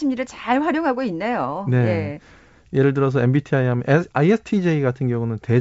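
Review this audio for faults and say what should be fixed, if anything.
Nothing here needs fixing; no faults are audible.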